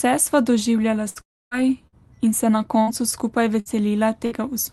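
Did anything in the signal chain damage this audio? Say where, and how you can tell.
Yes, at the network stage. A burst of packet loss occurs at 1.09–1.18, 1.87–1.95, 2.82–2.90, 3.60–3.68 and 4.25–4.34 s. Each time, the sound smears into a held buzz or hiss that fades, and about 60 ms of speech is skipped before it resumes. These gaps are too short to reach silence, which separates them from a dropout.

The longer event from 1.21 to 1.54 s is a long network dropout, likely caused by packets that stopped arriving altogether. The concealment stretches the last sound, fades it, then leaves plain silence, and about 0.3 s of speech is lost. That silent tail is what distinguishes it from the brief bursts. The band-limited call codec carrying everything adds only its ordinary coding texture.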